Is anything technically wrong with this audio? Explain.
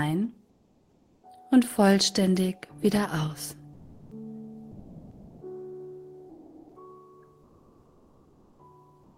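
Yes. Comfort noise in place of the background occurs at 0.51 to 1.23 s, 7.43 to 8.59 s, and from 9.03 s to the end. The background turns steady and featureless, about 1 to 2 dB quieter. This is likely discontinuous transmission in Opus filling the pauses with synthetic noise.

Sound dropped by the voice detector occurs at 3.75 to 4.11 s, 4.71 to 5.39 s, and 6.31 to 6.75 s. About 360 to 440 ms of sound is lost each time and replaced by steady noise. The likely cause is the detector mistaking real sound for background.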